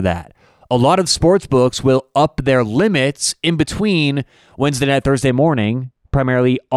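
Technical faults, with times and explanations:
5.30 to 6.76 s, de-emphasis applied wrongly: for the final stretch of the speech, a treble-cutting filter is applied to audio that never had the matching high-frequency boost, or applied twice, so the top end rolls off smoothly and the speech turns dull and muffled, about 13 dB down at 10 kHz relative to 1 kHz. On a spectrogram, energy above a few kHz fades progressively from this point onward, with no sharp cutoff edge. The waveform looks smoother, with fewer fine, spiky details.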